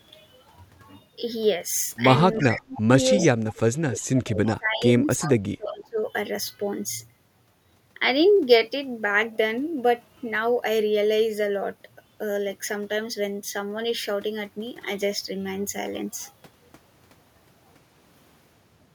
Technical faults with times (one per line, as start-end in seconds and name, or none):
2.38-2.61 echo leak
2.41-2.90 speech suppressed in double talk
3.17-6.00 speech suppressed in double talk
3.18-3.25 echo leak
4.01-4.05 echo leak
5.17-5.31 echo leak
5.67-5.72 echo leak